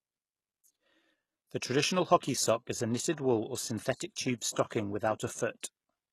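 A speech clip with plainly audible codec damage from start to finish. The treble is not genuine. Nothing is present above 12.3 kHz. S sounds come out gritty and metallic. The upper harmonics do not line up with the lower ones. This points to HE-AAC compression as the likely cause. The codec keeps only the lower band and rebuilds the top by copying lower bands upward under a coarse envelope. The damage fits a bitrate around 16 kbps. Pre-echo also occurs from 5.60 to 5.63 s. A short hiss leads into a sharp attack by about 28 ms, and the attack itself sounds soft and smeared. The codec spread its quantisation noise across the whole block. Noise sized for the loud onset also filled the quiet gap before it.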